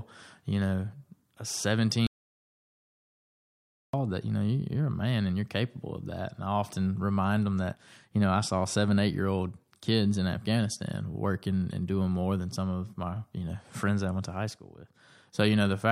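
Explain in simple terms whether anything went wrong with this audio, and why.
Something did go wrong: there is an audio dropout to silence from 2.07 s to 3.93 s. The speech stops abruptly in mid-flow and returns just as suddenly, with nearly two seconds of total silence between, not even the faint background hum of the room. That silence suggests the input signal was cut off, likely by a disconnected device, a failed link or an accidental mute, while recording continued. Whatever was said during the gap is lost.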